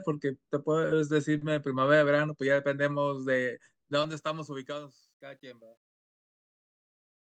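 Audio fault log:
3.92–7.39 s truncation distortion on a fade: the speech fade-out starting around 4 s is requantised without dither, which fits about 11 bits. The tail turns gritty, worst from 5.65 to 7.39 s. The waveform shows square steps, and the spectrogram shows broadband grainy bursts.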